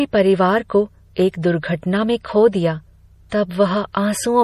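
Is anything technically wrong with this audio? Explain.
Yes. Two compression faults are audible in this speech clip.

MP3 compression affects the whole clip. Nothing is present above 15.3 kHz, a hard treble cut-off, and the damage is plainly audible as a watery, swirly texture where weak frequency lines drop in and out between frames. This likely points to MP3 encoding at a low bitrate around 40 kbps.

Pre-echo occurs from 3.30 to 3.32 s. A short hiss precedes a sharp attack by about 24 ms because the codec spread its quantisation noise across the whole block, filling the quiet gap before the onset. The attack sounds softened and smeared.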